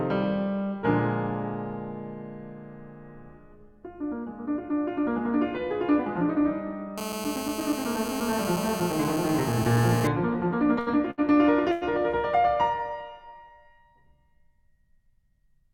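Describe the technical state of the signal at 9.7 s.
A hard, raspy buzz at 217 Hz, rich in harmonics and about 7 dB below the music, runs steadily from 6.98 to 10.07 s. This is GSM phone buzz: a nearby 2G phone on a call bursts 217 times a second, and the audio circuitry rectifies those radio pulses.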